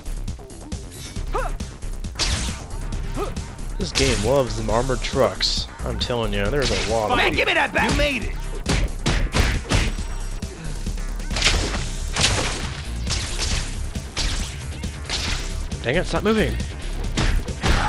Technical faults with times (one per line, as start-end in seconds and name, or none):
0.00-17.88 resampler restarted on every block